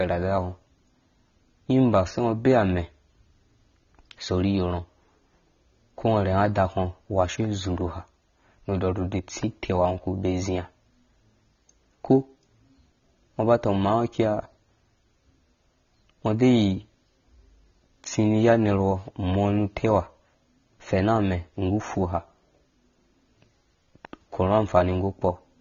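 Throughout the speech, the sound is dull and smeared, with a fizzy, warbling edge on sibilants, likely from AAC compression at a low bitrate, around 24 kbps. A spectrogram shows nothing above 7 kHz.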